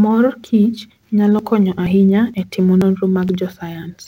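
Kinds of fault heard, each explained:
Audio missing between chunks: brief skips of about 30 ms roughly every half second, likely where the recorder drops audio while swapping one half-second chunk for the next.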